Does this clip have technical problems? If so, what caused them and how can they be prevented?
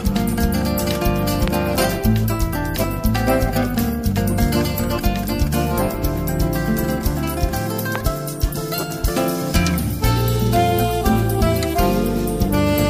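Yes. A loud pop, a sharp click standing roughly 15 dB above the sound, strikes at 1.48–1.50 s and again at 7.96–7.98 s. It was likely a voltage spike from a plug, switch, static or driver glitch. Secure connections, avoid switching during recording, and ground the equipment.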